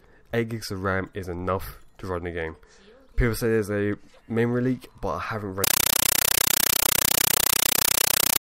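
An undecoded AC-3 stream is treated as plain samples, a compressed stream played as audio: from 5.64 to 8.41 s, loud 8 ms noise bursts chatter 31.25 times a second.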